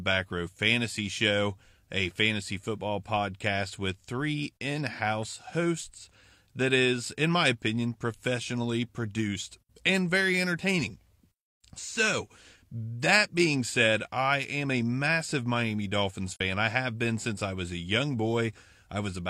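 At 16.33 to 16.41 s the speech fades briefly into a soft-edged gap. This is AAC frame loss with muting. The decoder zeroed the missing spectrum, and the overlapping windows fade the sound out and back in, which fits one lost frame of about 43 ms.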